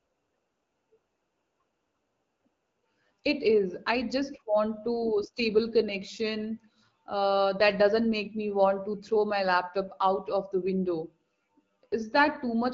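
Speech over HD Voice, with no technical faults audible.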